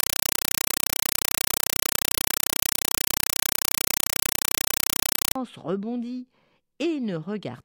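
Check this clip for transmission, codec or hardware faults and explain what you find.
There's one clear fault. From 0.0 to 5.36 s, a compressed stream is played as audio: an undecoded Dolby Digital bitstream treated as samples, giving loud static bursts about 5.3 ms long, 31.25 times a second, instead of speech.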